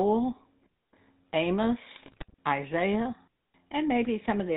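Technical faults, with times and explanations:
Throughout: GSM full-rate codec. The speech is rebuilt from a coarse vocal-tract model driven by sparse pulses, giving a buzzy, gravelly roughness consistent with a 13 kbps stream. On a spectrogram nothing appears above 4 kHz, and the harmonics look smeared and grainy.
1.96 to 2.34 s: GSM bit errors. Corrupted filter, pitch and gain values reach the decoder over many consecutive frames, so the speech breaks into squawks, pops and gargling. The waveform shows abrupt level bursts, and the spectrogram shows distorted, blotchy frame-length blocks.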